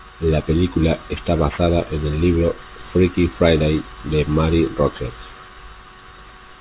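Aliasing runs through the whole speech clip. The sound seems to have been cut to an 8 kHz rate with no low-pass filter first. Content above 4 kHz folds back down as false tones. Sibilants turn gritty and metallic, and the folded energy sits fairly low under the speech.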